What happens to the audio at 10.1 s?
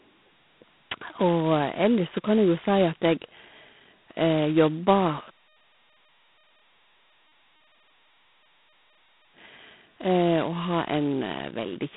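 At 10.1 s the speech carries the G.726 ADPCM damage present throughout: at 16 kbit/s only 2 bits code each sample's difference from a prediction, so a harsh, rasping hiss rides on the sound and swells with its level. A spectrogram shows noise smeared between harmonics, nothing above 3.9 kHz, and a narrow telephone band of 150 Hz to 3.5 kHz.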